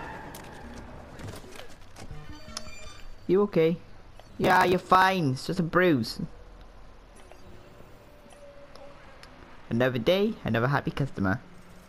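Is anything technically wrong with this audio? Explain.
Yes. From 4.31 to 5.02 s there is processor overload crackle: dozens of short buffers, around 3 ms each, miss their deadlines and are skipped, leaving hard-edged gaps. This gives gritty tearing, seen as waveform dropouts and vertical broadband streaks.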